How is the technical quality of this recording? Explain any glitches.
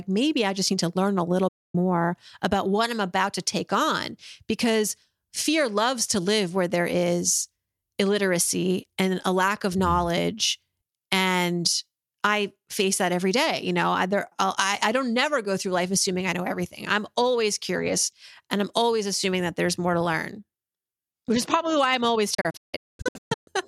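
The recording has two digital broadcast dropouts. At 1.48 s the sound cuts for about 0.26 s, to 1.75 s. Between 22.34 and 23.48 s there are several short holes totalling about 0.83 s, the longest 0.22 s. The receiver lost the signal or rejected corrupted frames and muted until clean ones arrived, so that audio is simply gone. Each gap starts with a quick 8 ms fade, which shows as a flat line in the waveform and blank vertical bands on a spectrogram.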